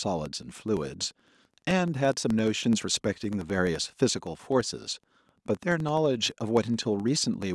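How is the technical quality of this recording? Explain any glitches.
The technical quality is compromised by one fault that runs through the entire speech recording. Throughout, a regular ticking buzz at 11.7 Hz sits under the speech, rising and falling with its level. This is a filter restarted on every block. The filter loses its state between blocks, so each block starts from silence with a small transient. That repeat rate fits 2048-sample blocks.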